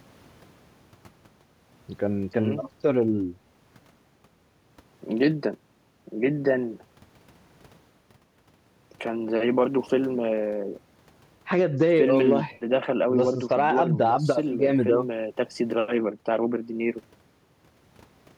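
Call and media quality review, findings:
No audible faults found in the speech recording; no findings to raise.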